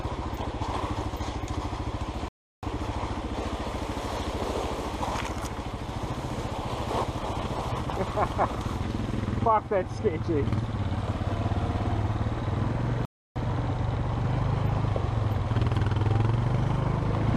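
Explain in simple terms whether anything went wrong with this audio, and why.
Twice the audio goes briefly silent in a playback stall. Most likely the player ran short of data or was held up, so it had nothing to send to the speakers until it caught up. The sound cuts out mid-flow from 2.28 to 2.63 s, a gap of about a third of a second, and again from 13.05 to 13.36 s, about 0.31 s, before carrying on.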